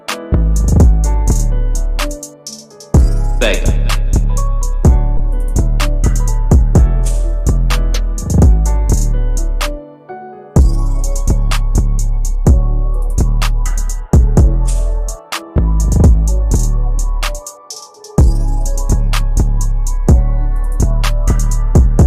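At 5.17 to 5.21 s, short concealed packet loss: about 20 ms never arrived and was synthesised from preceding sound, giving a brief smear, visible as smoothed, repeated spectrogram texture.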